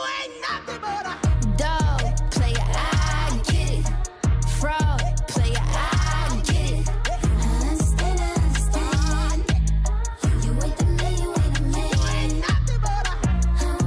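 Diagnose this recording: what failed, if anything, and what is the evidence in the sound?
Nothing in the recording stood out on listening as a failure at any stage of the chain.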